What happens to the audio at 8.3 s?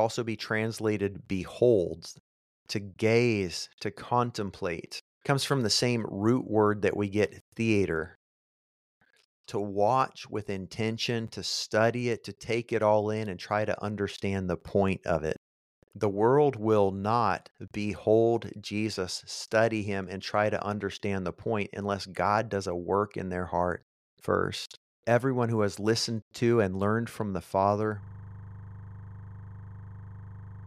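Nothing goes wrong at 8.3 s; the speech continues there without any audible dropout, click, distortion or other fault.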